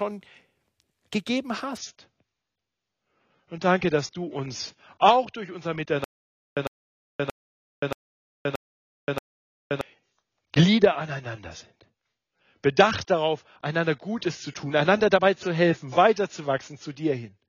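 At 1.77 s the speech suddenly gets duller and a bit swirly, with nothing above 7.1 kHz, and it stays that way to the end. That's the adaptive stream switching to a lower bitrate, and the sound fits a drop from around 96 to 24 kbit/s AAC.

From 6.04 to 9.81 s there's a stutter with silent gaps: a 103 ms burst repeats six times, each followed by about 525 ms of dead silence, so it cycles every 628 ms. It's likely the stream stalling and replaying its last fragment, and the audio for that stretch is lost.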